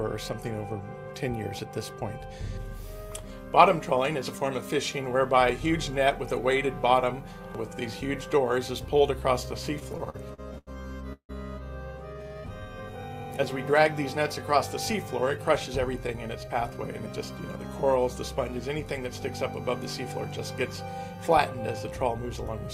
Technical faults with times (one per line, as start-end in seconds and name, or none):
9.79-10.69 repeated stalls (stutter)
11.13-11.31 call audio freeze
12.13-13.33 jitter buffer slow-down
15.22-17.56 jitter buffer speed-up